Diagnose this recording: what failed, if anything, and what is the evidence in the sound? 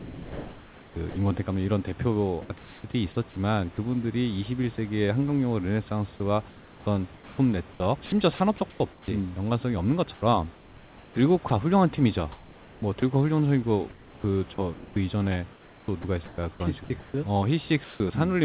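Sound chopped by the voice detector, call processing stage: speech at 0.00–1.16, 6.50–9.08, 10.14–11.50, 12.32–13.02 and 13.90–18.00 s alternates with flat noise. It is likely transmission gating, with striped, smooth gaps on the spectrogram.

Sound dropped by the voice detector: brief speech fragments vanish at 2.42–2.50 s and 4.76–4.78 s. This is likely mistaken silence detection, with the waveform cut into a short, even noise floor.

Comfort noise in place of the background: from 2.42 to 2.84 s the room noise becomes a featureless hiss, likely synthesized during a transmission pause. On the spectrogram it appears as a uniform, textureless band below 4 kHz.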